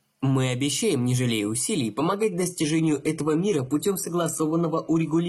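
A speech clip in which, right after "обещаем не жалея усилий" at 1.97 s and continuing to the end, the adaptive stream drops to a lower bitrate. The connection slowed, so the player switched versions without any gap. The sound becomes duller and coarser, in a way that fits a move from roughly 96 kbit/s AAC to a 16 kbit/s HE-AAC stream. On a spectrogram the energy above 11.8 kHz disappears abruptly at that instant, while the waveform runs on unbroken.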